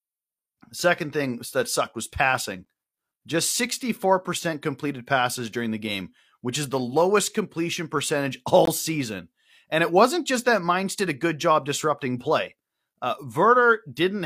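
At 2.65 s, after "that sucked was passing", and again from 8.65 to 8.68 s, after "the lowest completion percentage", the speech breaks for about 12 ms and then 20 ms. These are gaps between stream segments, six seconds apart, where mistimed segment boundaries leave silence. The waveform drops to a flat line with hard edges, and the spectrogram shows a thin, empty vertical strip. No speech is lost.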